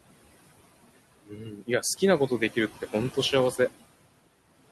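Noise suppressor artifacts run through the whole clip. The suppressor estimates which frequency bands hold steady background and pulls them down frame by frame, by about 19 dB here. The room noise, sitting about 14 dB below the speech, drops away in the gaps and swells back whenever speech starts.

Speech cut by the noise suppressor occurs from 1.26 to 2.02 s. In this stretch the suppressor mistook parts of the speech itself for noise and attenuated them along with the background, by about 17 dB at the deepest point. Roughly half a second of that span is affected. Softer sounds within it come across swallowed and faint, before the level recovers after 2.02 s.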